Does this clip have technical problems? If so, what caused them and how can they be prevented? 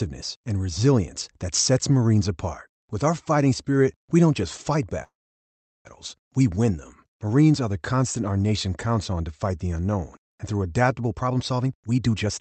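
Yes. A call audio freeze runs from 5.03 to 5.88 s, right after "we don't just fight". The likely cause is packets held up in transit until the jitter buffer ran dry. The receiver stretched the last sound briefly, then left about 0.74 s of near-silence. When the packets arrived, playback resumed at "we win them" with nothing lost, but the stream now ran about 0.82 s later. Preventing this means fixing the network path's congestion, or giving the jitter buffer more headroom.

A jitter buffer speed-up runs from 11.07 to 12.40 s, following "the unknown and through". The buffer was holding more audio than its target, so the receiver repeatedly cut out short pitch-period slices, about 0.4 s in total. The sound plays at roughly 133% speed with unchanged pitch, which makes the ending sound rushed. Steadier packet delivery would prevent this, as would letting the buffer shrink more gradually so it removes less audio at once.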